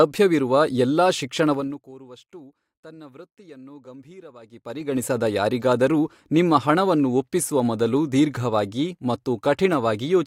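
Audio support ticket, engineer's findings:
Gain ramp applied in unsmoothed 2 dB steps: zipper noise. 1.52–1.92 s, level dropping about 25 dB at roughly 30 steps a second; 4.4–5.04 s, rising about 25 dB at roughly 20 a second. Each step clicks, giving a ticking rasp over the fades.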